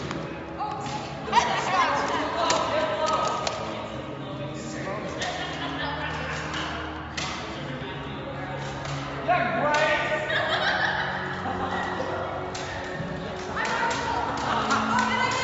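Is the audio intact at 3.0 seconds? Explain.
Yes, the audio at 3.0 seconds is intact, with no fault to be heard at that moment.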